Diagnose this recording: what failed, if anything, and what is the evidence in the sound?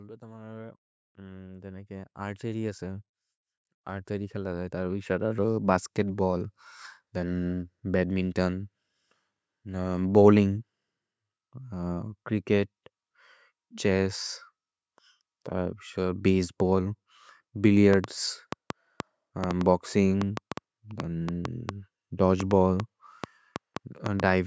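The speech and its background swell together twice near the start: from 0.19 to 3.11 s the level climbs by about 11 dB, then again from 3.86 to 5.6 s by about 8 dB. That is automatic gain rising, a fault in the call processing stage. The automatic gain control judged the input too quiet and ramped its gain up over a couple of seconds. Because it raises everything it receives, the room noise grows along with the speech.

From 17.93 s to 24.21 s a train of clicks sits over the sound, roughly twenty similar pops at an uneven spacing averaging about 3.7 per second, standing out by something like 15 dB and audible in the pauses as well as under the speech. Near-identical, repeated impulses like these likely come from electrical interference from nearby equipment or a faulty connection or power supply, injecting pulses in the analogue wiring or the driver stage. The call's microphone processing has removed everything above 8 kHz, which fits normal wideband call audio, so the clicks are heard without their highest edge.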